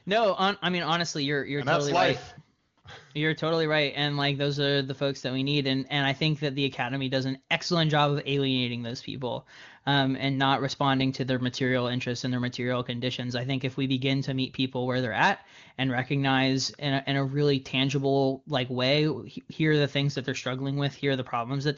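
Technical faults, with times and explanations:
2.59–2.77 s and 2.81–2.83 s, AMR comfort noise: the sender treated the pauses as silence and stopped sending speech frames, so smooth, steady synthetic noise briefly replaces the real background.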